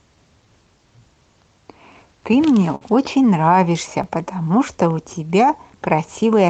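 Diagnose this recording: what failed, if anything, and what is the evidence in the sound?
Clock drift between sender and receiver runs through the whole speech clip, at the network and buffer stage. The sender's clock runs about 4% slow, so the receiver's jitter buffer keeps draining and must be refilled to keep playback continuous.

Repeated timing corrections run from 0.16 to 6.47 s. Playback moves at 97% speed, with small repeated pieces adding roughly a fifth of a second overall. This is heard as faint, unevenly spaced hiccups and a slightly dragging tempo as the receiver compensates for the slow sender.

A short stall from a late packet occurs at 2.75 to 2.83 s. The buffer ran empty and the receiver stretched the last sound by 57 ms until the packet arrived. Nothing is lost, but that moment is held too long. The audio also has a band-limit near 8 kHz, consistent with a low-bitrate Opus call path.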